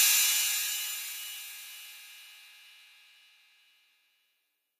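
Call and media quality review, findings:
Noise suppressor applied to music or sounds, throughout. Held tones and decay tails pulled down by roughly 10 dB while attacks pass, giving pumping and thinned sustain. Speech-tuned suppression stage treating steady content and ambience as noise.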